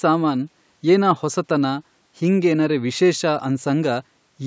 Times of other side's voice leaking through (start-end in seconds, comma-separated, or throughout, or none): none